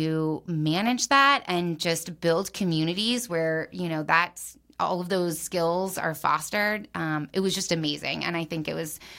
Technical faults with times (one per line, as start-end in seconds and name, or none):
none